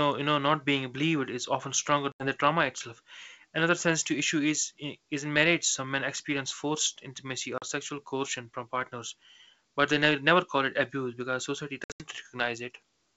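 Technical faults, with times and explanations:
2.12–2.27 s, 7.58–7.64 s and 11.84–12.05 s: packet loss on an ADPCM call. Chunks of the speech drop out as hard-edged silent holes of about 80 ms, then 40 ms, then 140 ms spread in bits over roughly 160 ms, the longest run being 80 ms. Because the decoder's predictor and step size lose sync with the sender during each gap, the sound comes back slightly distorted before settling. The clean wideband sound around the holes fits G.722 at 64 kbit/s.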